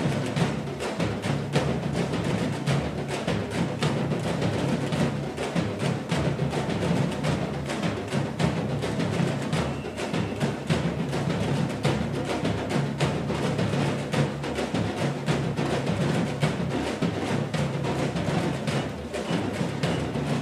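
Nothing technically wrong turns up anywhere in the recording.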